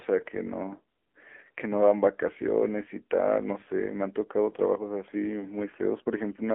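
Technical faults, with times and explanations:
Throughout: AMR narrowband mobile codec. The band is confined to roughly 300 Hz–3.4 kHz, and a buzzy, synthetic coding texture points to a low bitrate near 7.4 kbps.
5.40–5.47 s: lost AMR speech frames. A brief dip or warble, consistent with one lost 20 ms frame that the decoder concealed from the previous frame's pitch and vocal-tract settings at reduced gain.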